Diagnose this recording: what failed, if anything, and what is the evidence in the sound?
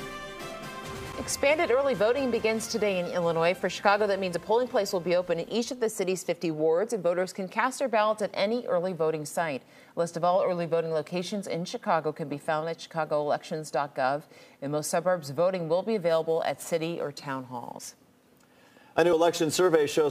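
Sample-format conversion failed with a crude rate conversion from 16.09 s to the end at 20.11 s. A gritty, inharmonic fizz follows the loud and high parts of the sound, about 30 dB below it. Samples were dropped or repeated without filtering, which fits a 48 kHz to 44.1 kHz change.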